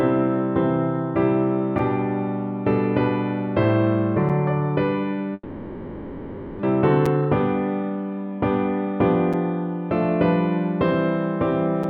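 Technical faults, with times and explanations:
1.78 s, 4.29 s, 7.06 s, 9.33 s and 11.84 s: gap between chunks. Five tiny hard-edged holes of about 6.5 ms interrupt the sound, roughly every 2.5 s. The audio was delivered in 2.5 s chunks, and each join leaves a sliver of silence, though no sound is lost.
5.33 to 6.65 s: long network dropout. The sound smears into a buzzy, fading continuation for about 1.3 s, then falls silent for 30 ms before resuming with about a second of material gone. Likely a network stall where the receiver concealed the missing packets, and the delay shifted by roughly a third of a second.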